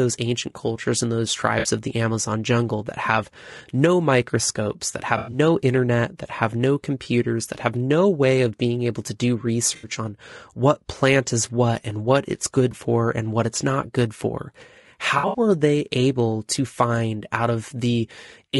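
Throughout, the speech sounds rough and grainy, with noise between the harmonics and a thin, synthetic top band. This is low-delay AAC compression, likely AAC-ELD at around 32 kbps. Unlike dropouts, this damage is constant rather than momentary.

AAC frame loss with concealment occurs at 1.59, 5.17, 7.03, 9.75, 12.71 and 15.17 s. For 20 to 120 ms, the decoder rebuilds missing audio from the last good spectrum. The result is smeared, phasey blurs, not clicks or silent gaps.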